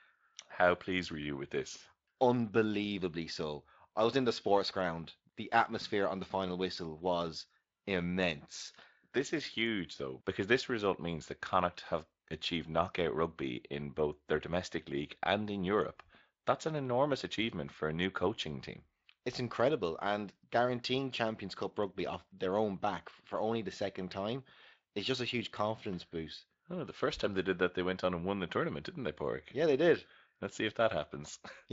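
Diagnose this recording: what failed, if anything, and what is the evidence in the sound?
Nothing in this speech recording points to a failure at any stage. It has been through the Speex codec, which leaves a light texture and no content above about 7.6 kHz, consistent with a wideband setting near 24 kbps.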